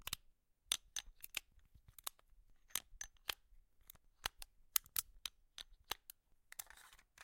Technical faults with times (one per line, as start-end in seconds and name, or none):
3.95 damaged data in a compressed stream